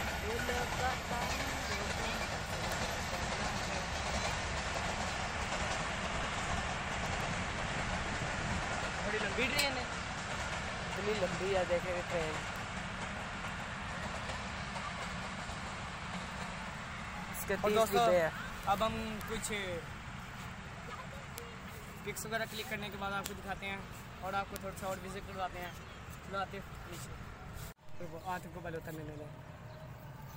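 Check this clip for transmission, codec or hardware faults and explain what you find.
There is one fault, word clock ticks, from 0.12 s to 30.35 s. An unlocked receiver clock, roughly 150 ppm off, drops or repeats one sample every 0.15 s or so, giving sharp, uneven ticks throughout.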